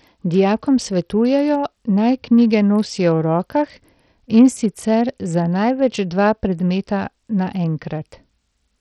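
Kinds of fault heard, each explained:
Bluetooth SBC compression: Throughout, the speech sounds gritty and coarse, with treble flickering and nothing at all above 16.8 kHz. This is likely SBC coding with a small bit pool starving the upper sub-bands, and the heavy damage fits a rate near 64 kbps.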